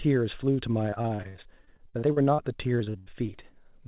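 From 0.9 to 2.4 s, and again from 2.78 to 3.40 s, the speech turns choppy and robotic, with about a third of each stretch smeared over. That is repeated packet loss: packets kept dropping, leaving gaps of up to 60 and 80 ms, each bridged by stretching the previous sound.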